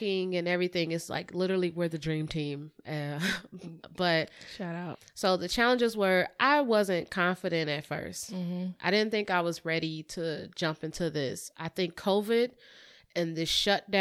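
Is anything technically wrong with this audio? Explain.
No, nothing is technically wrong.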